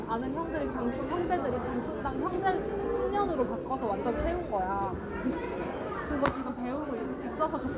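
There are no technical faults to describe in this sound at any point in time.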